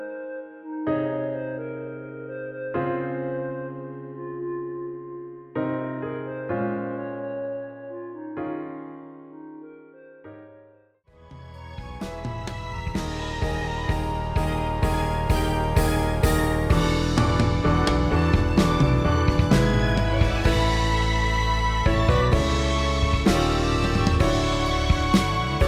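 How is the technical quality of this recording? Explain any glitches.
Nothing stood out on listening to this recording; there were no glitches to explain.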